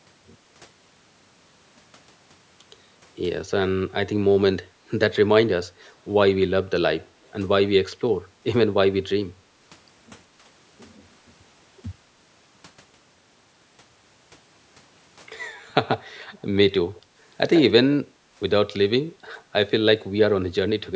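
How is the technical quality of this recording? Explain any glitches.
The recording shows short bursts of echo leak at four points. At 5.85 s and 7.24 s, brief scraps of the speech come back 174 ms late, very faint and far below the direct voice. At 15.91 s and 17.55 s the returns arrive 133 ms late and much louder, only about 10 dB under the speech, heard as a repeat lasting well under a tenth of a second. The likely cause is a loudspeaker playing the call while its echo canceller let part of what the microphone picked up pass back into the line.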